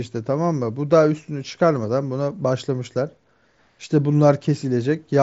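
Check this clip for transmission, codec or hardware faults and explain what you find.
Nothing stood out on listening to this speech, which comes over a Bluetooth mSBC headset link with its top end stopping at about 7.7 kHz.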